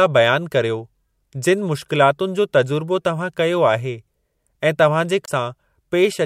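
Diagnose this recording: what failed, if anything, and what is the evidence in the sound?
A tick and a brief dropout of around 20 ms at 5.26 to 5.28 s, then the speech resumes from elsewhere: a CD skip, the playback laser jumping tracks on the disc.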